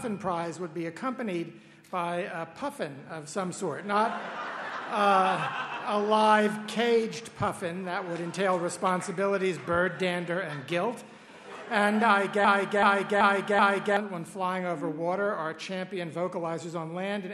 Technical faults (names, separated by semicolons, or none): broken-record loop